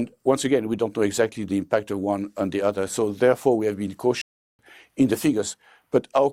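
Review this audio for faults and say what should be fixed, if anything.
A stream reconnect at 4.21 to 4.63 s: the connection dropped, leaving about 375 ms of silence, and the restarted decoder resumes roughly a third of a second further on. Unlike a simple dropout, the sound jumps ahead rather than picking up where it stopped. To prevent it, give the player enough buffering and connection-retry headroom to ride out brief network interruptions without tearing down the stream.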